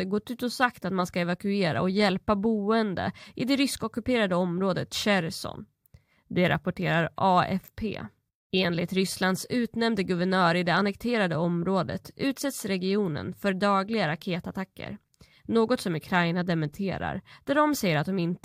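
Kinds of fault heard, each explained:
Nothing here stands out as a technical fault; the speech comes across without any of the problems this list is meant to catch.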